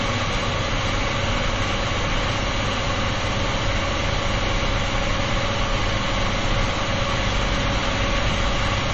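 From start to end, the sound stops dead above about 8.2 kHz and carries plainly audible watery, swirling artefacts with smeared attacks, likely from MP3 compression at a bitrate near 30 kbps, where the encoder drops the treble and switches weak frequency lines on and off between frames.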